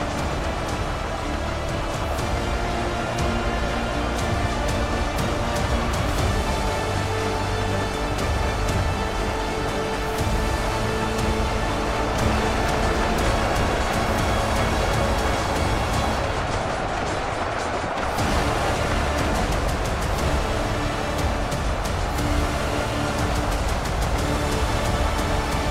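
No technical faults can be heard anywhere here.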